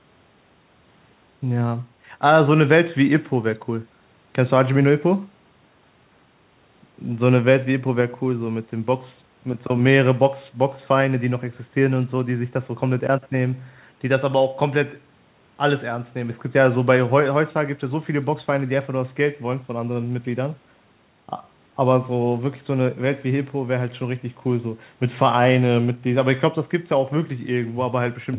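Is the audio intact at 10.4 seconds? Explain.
Yes, the speech at 10.4 seconds is intact, with no fault at that moment.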